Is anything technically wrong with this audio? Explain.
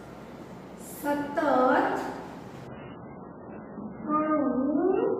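Yes. From 2.67 s to the end, the audio shows an adaptive stream at a lower bitrate. The player switched to a lower-quality version of the stream, as happens when the connection slows, and stayed there. Quality drops abruptly, with no gap. Above 3 kHz there is no content at all, and coding artefacts rise sharply. This fits a step down from an MP3 stream of around 128 kbit/s to one of only about 8 kbit/s.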